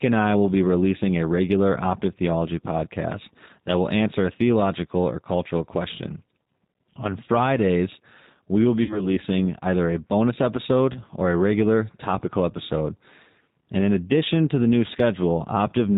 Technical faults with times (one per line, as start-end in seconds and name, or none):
0.00-15.98 G.729 codec
8.83-9.08 VoIP packet loss concealed by the speech codec
10.93-10.99 VoIP packet loss concealed by the speech codec